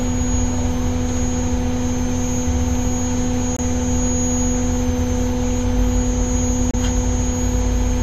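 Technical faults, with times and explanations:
3.57 to 3.60 s and 6.71 to 6.75 s, damaged data in a compressed stream: Each event is a brief blip, about 35 to 40 ms long, that cuts across the sound. Part of the compressed stream was corrupted at these points. The decoder could not read those frames correctly. It produced garbled output, lost sync, and searched for the next valid frame header. That short stretch of misdecoded data is what makes the blip.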